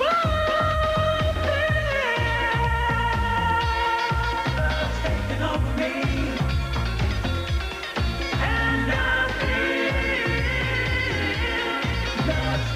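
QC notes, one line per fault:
Nothing stood out on listening, so there is nothing to log for this clip.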